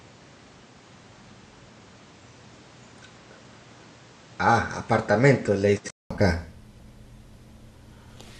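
From the start to 6.1 s the speech is capped near 8.9 kHz, a few decibels quieter, with a fresh noise floor well below it. A short gap of about 200 ms then marks a return to full brightness, which points to a likely input switched to a poorer device rather than a plain filter.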